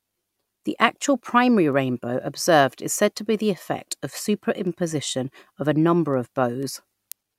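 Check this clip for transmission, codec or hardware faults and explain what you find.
There is one hardware fault, and it runs through nearly the whole clip. From 0.26 s to 7.12 s the speech carries sharp ticks of uneven strength at a steady rate of about one every half second, around fifteen in all. These are word clock ticks. The digital link's receiver runs on its own clock, which drifts from the sender's by something like 50 ppm. Each time the two clocks slip past each other, a single sample is dropped or repeated, and that discontinuity clicks.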